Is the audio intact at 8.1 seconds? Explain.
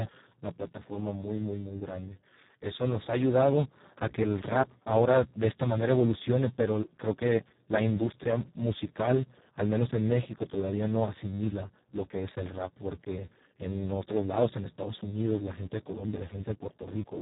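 No, at 8.1 seconds the speech is still carrying the Speex codec damage that runs through the whole clip. Speex is a CELP coder, and here the excitation is starved of bits, which fits a setting down around 4 kbps. That leaves the speech hoarse, noisy and edging toward robotic. Nothing comes through above about 3.8 kHz, so the top end sounds dull and boxed in.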